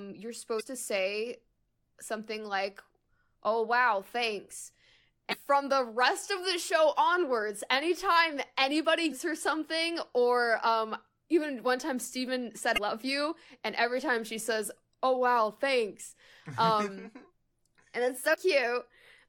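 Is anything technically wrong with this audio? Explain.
Yes. Damaged data in the compressed stream causes five brief glitches of about 46 ms each at 0.56, 5.29, 9.08, 12.74 and 18.30 s, where the decoder loses frame sync.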